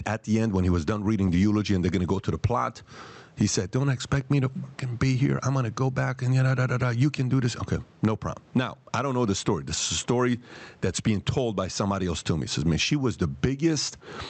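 All the way through the speech there's gain pumping. The level swings by something like 15 dB, ducking on loud moments and climbing back afterwards, so loud and soft parts end up squashed together. The likely cause is input gain set far too high, with a fast limiter clamping down on every loud sound. You can also hear room noise about 44 dB under the speech, and the call codec's top end stops around 8 kHz.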